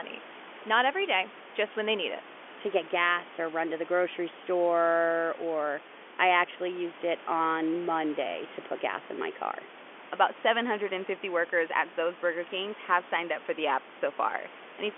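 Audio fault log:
Nothing to log here, as no faults turn up anywhere in this speech clip.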